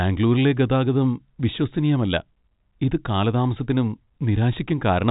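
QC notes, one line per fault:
Nothing to flag on this one, just ordinary G.711 telephone coding doing its job, with the top of the band stopping around 3.8 kHz as that format does.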